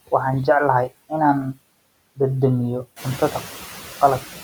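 Throughout the speech, background noise dips between phrases and swells beneath them. These are noise suppressor artifacts from frame-by-frame band suppression that cuts the noise by about 17 dB. From 3.03 to 4.03 s, while the room noise rises around 3 s, eight brief ticks, each roughly ten milliseconds at most, repeat steadily. These CD scratch ticks come from damage beyond error correction that forces interpolation or muting once per disc turn.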